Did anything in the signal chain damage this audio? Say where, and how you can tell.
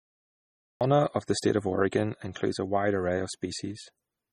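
Yes. The recording or stream began late, a cut-off start at the capture or storage stage. The file holds digital silence until 0.81 s, and then the speech enters mid-sound, with no natural attack or fade-in. Whatever was said before that point is missing.

The whole clip also shows heavy codec damage, likely from MP3 compression at a low rate, consistent with around 32 kbps. Nothing is present above 17.8 kHz, where the encoder cut the treble. Weak frequency detail flickers between frames, which makes the speech sound watery and swirly and smears consonant attacks.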